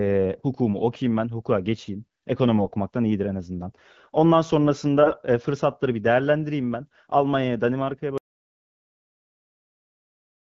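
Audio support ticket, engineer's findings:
Short hoarse, gargly bursts at 2.58–2.70 s and 5.02–5.16 s, pitch and level roughly held. AMR bit errors in the weaker-protected frame bits, around 5% flipped, passing the checksum. Misplaced excitation pulses and skewed gain and spectral parameters cause the scratchiness over AMR-WB HD Voice, whose clean band fits 12.65 kbit/s.

Hard cut to total silence at 8.18 s, lasting to the end, no room tone. Audio dropout to silence, likely from lost input (device disconnect, link failure or stray mute) while the encoder kept writing silence.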